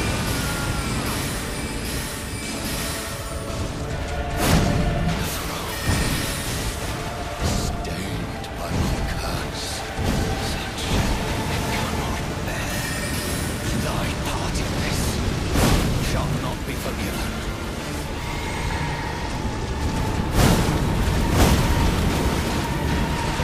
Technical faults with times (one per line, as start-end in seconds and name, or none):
none